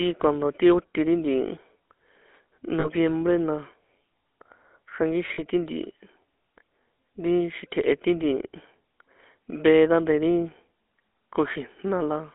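From start to finish the speech has a plainly audible buzzy, gravelly roughness and a thin band of roughly 250 Hz to 3.5 kHz. This fits the GSM full-rate codec at 13 kbps, which rebuilds the voice from a coarse pulse excitation. At 2.80 to 2.89 s and again at 5.34 to 5.42 s, the sound briefly holds as a rough metallic ring. These are lost GSM frames, roughly 40 ms each, which fits two dropped frames concealed by repeating the last good one.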